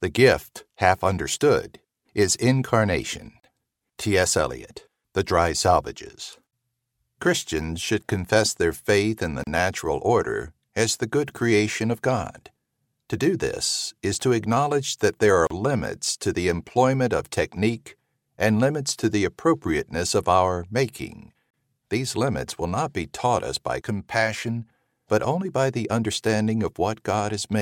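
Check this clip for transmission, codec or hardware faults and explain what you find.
One fault recurs: a gap at a join of encoded pieces, at 3.40, 9.44, 15.47 and 21.50 s, every 6 s, each about 35 ms long. Separately encoded segments were joined with their encoder start delay and end padding left in, so continuous sound drops to silence and resumes where it stopped. On a waveform or spectrogram these show as thin, full-band empty strips with slightly smeared edges.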